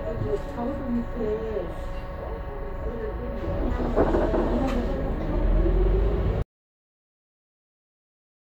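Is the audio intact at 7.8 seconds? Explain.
No. By 7.8 seconds you're inside a cut-off end: the audio stops dead at 6.42 s and stays in digital silence right through to the end of the clip. What's happened is that the final stretch of buffers never got written out or played, so the sound is chopped off mid-event rather than finishing. There's no decay or tail at all, just an abrupt drop to nothing, so at 7.8 s there's simply nothing there.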